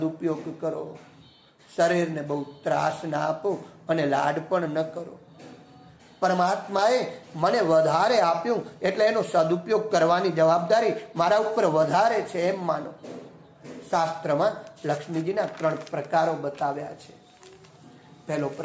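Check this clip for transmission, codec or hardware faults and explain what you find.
Nothing in this recording stood out as a problem on listening.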